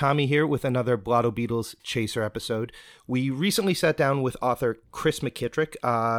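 No technical fault can be heard anywhere in the recording, with the signal level, timing and continuity holding steady from its opening to its close.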